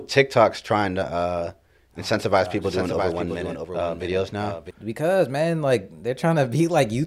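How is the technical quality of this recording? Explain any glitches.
The recording has one glitch, a doubled audio track. From 2.63 to 4.71 s, just after "uh oh incentivize oh", a second copy of the speech runs about 0.7 s behind the original and roughly 5 dB quieter. It is likely caused by a slower second capture path or two misaligned edit layers summed together. It sounds like an overlapping echo with no room tail, starting and stopping abruptly. On a spectrogram, full-band speech patterns repeat, shifted right, with hard edges. The waveform shows superimposed envelopes.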